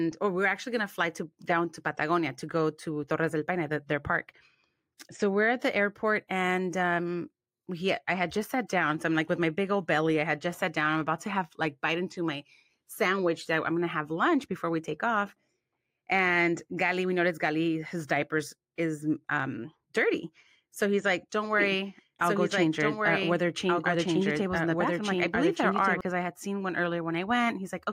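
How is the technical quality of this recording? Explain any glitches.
There is one clear fault. A doubled audio track runs from 21.6 to 26.0 s: a second copy of the speech, roughly 5 dB quieter and about one and a half seconds late, cuts in and out abruptly, likely from a slower second capture path.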